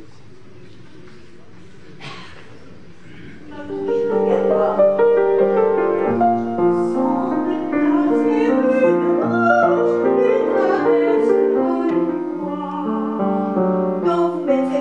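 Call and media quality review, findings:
No faults found in the reviewed audio. Nothing to trace to a component or mechanism.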